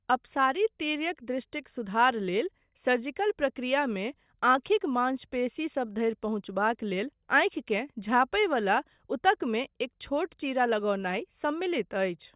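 No dropouts, clicks, distortion or level jumps turn up anywhere in the speech; nothing to flag.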